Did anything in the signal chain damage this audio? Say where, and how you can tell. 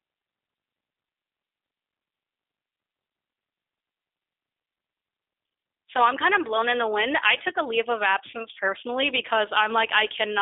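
Yes, at the codec: the whole clip is squeezed into roughly 250 Hz to 3.6 kHz and sounds rough and synthetic, which fits G.729 rebuilding speech at 8 kbit/s.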